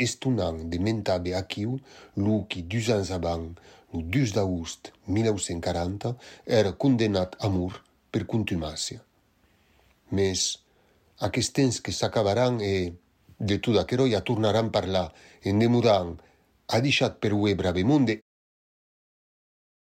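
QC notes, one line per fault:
No faults to note; the speech ends on a smooth fade-out that begins at roughly 18 s and is complete by 18.22 s.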